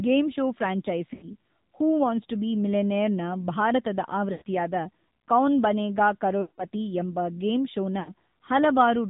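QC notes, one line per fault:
Throughout, AMR narrowband mobile codec: nothing above 4 kHz survives. The speech sounds buzzy and synthetic, which fits a low bitrate near 7.4 kbps.
1.14–1.32 s, 4.32–4.43 s, 6.42–6.66 s, 8.00–8.11 s, lost AMR speech frames: the speech smears, then fades toward silence. The decoder is repeating its last good settings with falling gain. Each gap suggests several consecutive lost frames.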